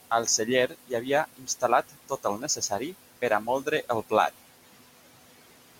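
All the way through, noise suppressor artifacts are there. The room noise sits only about 15 dB under the speech, and the suppressor pulls it down by about 17 dB frame by frame. So the background drops away in the gaps and comes back up under the talking.

Then there are three places where the suppressor bites into the speech itself. From 0.68 to 1.07 s it dips up to about 16 dB. From 1.37 to 1.63 s it goes down about 18 dB. From 1.89 to 2.94 s, just before "per a", it drops about 15 dB. That's speech cut by the noise suppressor: it mistook quiet bits of speech for noise. Only short stretches in each span are hit, a fraction of a second or so, but the speech there sounds swallowed or faded.

At 4.3 s there's a short gap of roughly 0.19 s. After it, everything through to the end is band-limited. That gives a duller, boxier tone, and a different noise floor sits far below the speech, roughly 40 dB down. 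Loudness stays about the same. This is likely the input switched to a poorer device, such as another mic or a headset call profile taking over.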